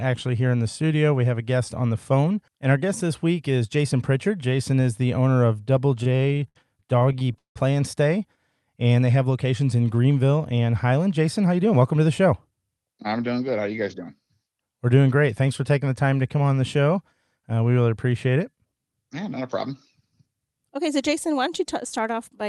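From 6.03 to 7.58 s the speech breaks into repeated stalls (stutter). Packets arrived late or too slowly, so the jitter buffer ran dry 17 times. Each time, the receiver carried the last sound forward until data resumed, filling 422 ms in all, with the longest hold lasting 170 ms. That is about 27% of the span. Because nothing is actually lost, this sounds like dragging and hiccupping rather than missing syllables. The longer holds fade as the continued sound runs on.

At 8.7 to 9.0 s, just before "they have locations in", a jitter buffer slow-down stretches the audio to 89% speed. To rebuild its reserve, the receiver repeated single pitch periods, adding 40 ms. Unlike the stalls, there are no halts. The sound simply runs slower and drawn out at the same pitch.

Two jitter buffer speed-ups follow, heard against the band-limited coding of the Opus call path. The first runs from 10.91 to 12.51 s, ending just before "I'm doing good", at 108% speed. 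Roughly 150 ms is removed. The second runs from 18.36 to 18.73 s, just after "we really appreciate", at 110% speed, with around 50 ms removed. In both, the buffer held too much audio and trimmed whole pitch periods in succession. The speech sounds hurried but keeps its pitch, and there are no audible gaps or clicks. That is what separates it from dropped audio.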